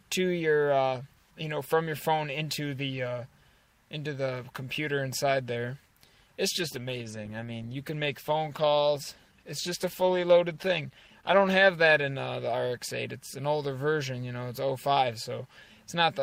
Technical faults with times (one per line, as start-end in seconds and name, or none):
6.54-14.85 call bitrate drop